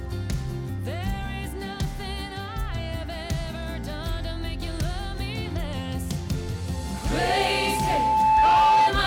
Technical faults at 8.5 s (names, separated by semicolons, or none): loudspeaker feedback squeal